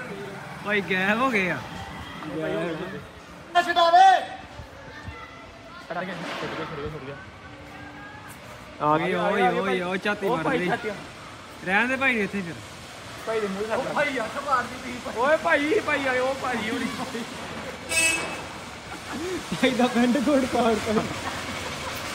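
Frames out of order occur four times: at 5.91 to 6.01 s, 13.85 to 13.91 s, 17.49 to 17.64 s, and 20.56 to 20.66 s. In each, two adjacent blocks of audio were decoded in swapped order. The blocks run about 46, 23, 70 and 46 ms, which fits swapped runs of one to three codec frames. Each stretch sounds like a brief garbled flutter. No time is lost.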